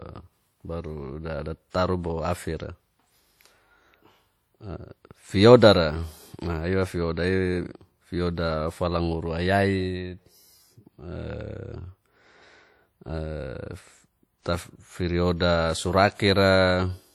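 Throughout the speech, a transform codec has likely quantised the signal coarsely, which fits WMA compression at about 48 kbps. The damage is plainly audible: ringing, washy smearing and a hiss that breathes with the speech, though content still extends to 20.1 kHz.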